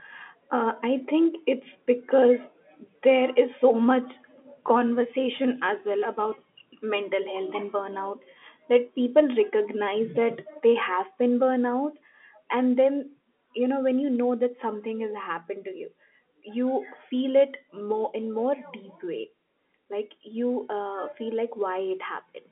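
Nothing stood out on listening to this telephone-band speech recording.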